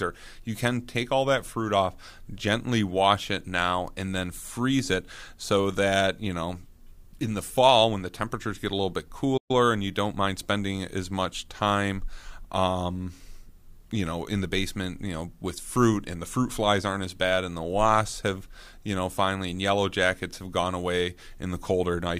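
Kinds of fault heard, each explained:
Playback stall: At 9.37 s the speech cuts out abruptly in mid-flow and the output sits in dead silence for 120 ms before sound returns at 9.51 s. The break is a clean hole rather than a fade or a burst of noise. The likely cause is the player briefly running short of audio data, or its playback thread being held up, so nothing reached the output until it caught up again.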